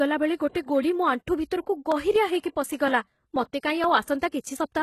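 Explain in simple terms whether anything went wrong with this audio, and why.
A few things went wrong, and you can hear them.

The whole clip has the sound of HE-AAC compression, likely the cause. That kind of codec keeps only the lower part of the sound properly and fakes the treble by copying lower bands upward and roughly shaping them. Nothing real survives above about 12.3 kHz here, and the rebuilt top end doesn't line up with what's underneath, so the codec damage is plainly audible across the speech.

At 0.67 s there's a pre-echo. The codec spreads its noise evenly over a short block of audio. When a sharp attack lands late in that block, noise meant for the loud part also spills into the quiet moment just before it. You get a short hiss, about 16 ms, ahead of the attack, and the attack itself sounds smeared.

From 1.92 s to 4.56 s there are periodic USB or driver dropouts. Something in the background blocks the audio path on a fixed schedule, every 0.24 s, and each time roughly 10 ms of sound is simply skipped. 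That happens about ten times, and you hear it as a steady run of regular ticks while the speech carries on.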